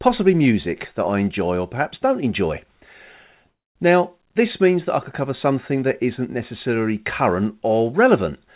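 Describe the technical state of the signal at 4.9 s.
At 4.9 s the speech is intact, with nothing wrong beyond the expected band limit of the call path, which carries it as G.711 A-law with nothing above 4 kHz.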